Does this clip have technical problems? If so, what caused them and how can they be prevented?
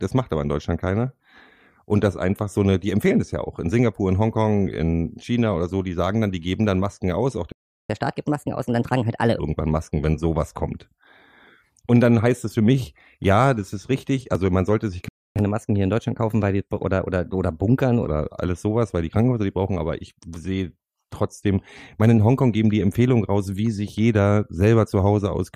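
Yes. The player likely ran out of buffered data or had its thread blocked, so output went silent in mid-flow: a playback stall of 0.37 s from 7.52 to 7.90 s, right after "aus auch", and 0.27 s from 15.08 to 15.36 s, after "man sollte sich". Keeping a deeper buffer and running audio on a high-priority thread prevents this.

Catch-up at higher speed follows each gap: the player resamples its backlog faster to regain lost time, raising speed and pitch together. The speech runs at 1.25 times speed, about four semitones high, from 7.90 to 9.39 s, then at 1.1 times, roughly one and a half semitones up, from 15.36 to 18.07 s. Time-stretching that keeps pitch fixed, or a gentler catch-up, avoids the audible shift.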